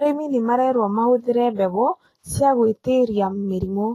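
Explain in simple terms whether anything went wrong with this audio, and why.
The speech has plainly audible compression damage throughout, likely Vorbis compression. The treble sounds hissy and grainy, and nothing reaches above about 14.1 kHz.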